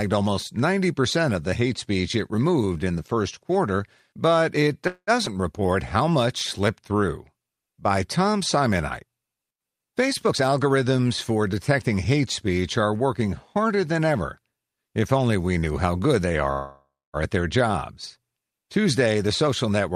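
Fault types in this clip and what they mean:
call audio freeze: At 4.87 to 5.10 s and 16.52 to 17.16 s the sound stalls, likely from packets held up in transit. A fading buzz fills about 0.2 s and 0.62 s, with silence after it, then speech resumes where it stopped. Unlike a skip, nothing is lost.
skip ahead: Right after "first quarter but it", at 5.25 to 5.29 s, roughly 70 ms of speech is dropped and the two sides are joined almost directly. Unlike a freeze, there is no filled gap. The audio simply jumps forward.
jitter buffer slow-down: From 5.34 to 6.12 s, leading into "slipped through", repeated pitch periods add 63 ms, so speech runs at 93% speed with unchanged pitch and drawn-out sounds. Unlike a freeze, there is no buzz or silence, only gradual stretching.
jitter buffer speed-up: From 10.25 to 11.41 s, before "detecting hate speech are", many tiny cuts removing roughly 0.2 s raise the pace to 117%. 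From 18.8 to 19.9 s, about 0.1 s goes at 108%. Pitch stays the same. Unlike a skip, there is no single audible jump.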